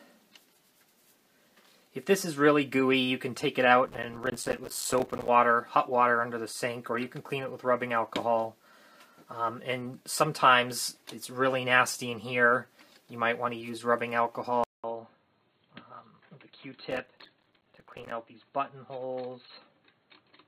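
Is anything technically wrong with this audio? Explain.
Yes, two kinds of trouble.

From 3.87 to 5.28 s, and again from 16.91 to 18.12 s, there's processor overload crackle. The machine couldn't finish its audio buffers in time, missing them one after another, and each miss dropped out as a tiny hole of silence with hard edges. The gaps sound consistent with buffers of about 5 ms, so the rapid run of dropouts comes across as a gritty, tearing crackle that stops once the load eases.

At 14.64 s the sound goes quiet for 200 ms, then comes back duller and boxier, with nothing above 4.3 kHz, a level about 5 dB lower, and a new noise floor about 40 dB under the signal. That's most likely the input switching to a poorer device mid-recording, such as a headset's call profile with its narrower band, and it stays that way to the end.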